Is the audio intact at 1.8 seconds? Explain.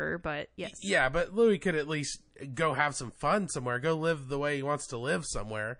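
No. Throughout the clip, including at 1.8 s, the speech sounds watery and swirly. This is likely MP3 compression at a low bitrate, around 40 kbps.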